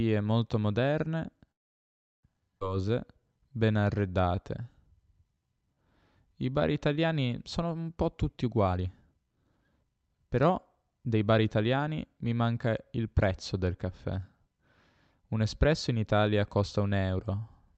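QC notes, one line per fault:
1.51–2.26 s, call audio freeze: The speech stops for about 0.72 s, nearly all of it silent, then resumes exactly where it left off with nothing lost. This is likely packets held up until the jitter buffer emptied. Unlike a skip, no speech is missing.
2.59–2.64 s, skip ahead: Playback jumps forward with only a 14 ms join, dropping roughly 0.4 s of speech and cutting the delay the freeze had built up. The two sides are spliced almost directly. Unlike a freeze, there is no audible gap but content is lost.
2.77–5.76 s and 6.27–6.95 s, jitter buffer slow-down: Repeated pitch periods stretch the speech to 91% and then 94% speed, adding 289 ms and 50 ms. Sounds are drawn out at unchanged pitch, which separates this from a tape-style slowdown that would also lower pitch.
8.44–11.65 s, jitter buffer speed-up: Short pitch-period pieces are cut out repeatedly, so the speech runs at 122% speed and loses around 0.7 s in total. 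It sounds hurried but the pitch stays the same, unlike a single skip, which removes one block at once.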